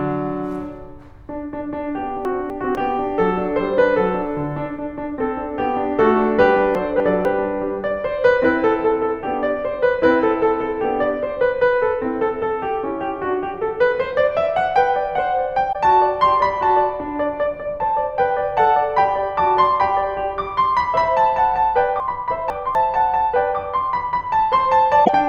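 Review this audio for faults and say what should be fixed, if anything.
Chunks out of order at 2.25–2.75 s, 6.75–7.25 s and 22.0–22.75 s: 250 ms blocks of the music play in the wrong sequence. In the first two, one block arrives a chunk late; in the third, two chunks late. Nothing is missing, but the passage sounds jumbled. Buffer incoming blocks and reorder them by sequence number or timestamp before playback.

Damaged data in a compressed stream at 15.69–15.76 s and 25.01–25.10 s: corrupted frames make the decoder lose sync and hunt for the next valid frame header. Each spot is a brief chirp or blip. Protect the stream with checksums and error detection so bad frames are caught before they reach the decoder.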